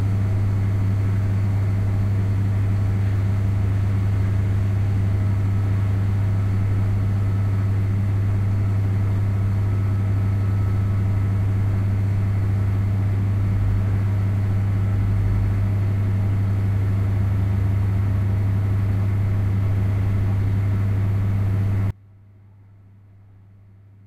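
An everyday-sound recording with an audio dropout to a faint residue at 21.91 s, lasting to the end: the sound cuts abruptly to a faint leak roughly 30 dB down, likely from a lost signal feeding a live path. The waveform collapses to a thin trace, the spectrogram fading to a dim band.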